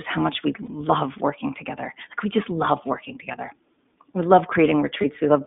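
Throughout, the speech sounds thin, slightly rough and synthetic, limited to roughly 200 Hz to 3.6 kHz: the iLBC codec, with plainly audible coding damage consistent with its 15.2 kbps, 20 ms-frame mode. At 0.66–0.70 s, between "how much we" and "working together", at 3.32–3.35 s after "we just love working", and at 5.02–5.05 s, a brief buzzy held vowel replaces the sound. These are lost iLBC frames, each gap about 20 ms, which fits a single missing frame. The decoder fills each gap by repeating the last pitch cycle with noise, and the sound recovers almost immediately afterward.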